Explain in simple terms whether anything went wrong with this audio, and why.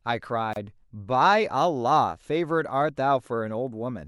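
At 0.53 to 0.56 s the speech stops for about 29 ms: a gap at a join of encoded pieces. Unlike a dropout, nothing is lost; it resumes exactly where it stopped.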